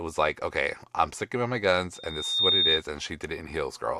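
Loudspeaker feedback squeal runs from 1.94 to 2.83 s, starting just after "I'm sticking by my". The microphone is hearing the loudspeaker it drives, and around 3.7 kHz the loop gain has risen above one, so that frequency feeds on itself. It swells over roughly half a second into a piercing single-pitched whistle that sits about 10 dB above the speech until the tone stops.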